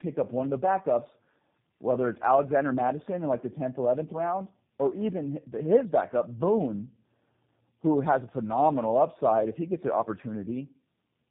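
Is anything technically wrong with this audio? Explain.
Yes. Throughout, the speech sounds rough, muffled and warbly, with nothing above 3.6 kHz: tandem speech coding, two low-rate speech codecs in succession, the second re-encoding the first's already degraded output.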